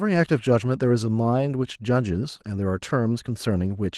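No faults found in this speech; the Opus voice compression is audible only as light coding texture across a full band, which fits hybrid SILK-plus-CELT coding at about 20 kbps.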